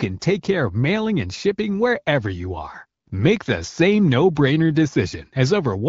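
No faults found: the speech passes through an AMR wideband (HD Voice) link at 12.65 kbit/s, and the light coding imprint is what that rate normally leaves.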